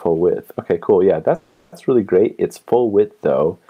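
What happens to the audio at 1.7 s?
At 1.7 s the audio is in a call audio freeze, from 1.35 to 1.74 s. Likely caused by late packets draining the jitter buffer. The last sound is stretched into a fading buzz for about 0.37 s, then resumes where it stopped with nothing lost. A spectrogram shows smeared, flat horizontal bands.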